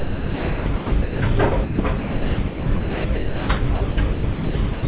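Sound chopped by the voice detector at 0.0 to 1.2 s, 1.64 to 3.49 s and 3.75 to 4.83 s: stretches of about 1 s, 1.3 s and 0.54 s are swapped for synthetic comfort noise, likely from the sender's detector gating out quieter passages, so the audio turns choppy. The band stops near 4 kHz, which fits a G.711 call path.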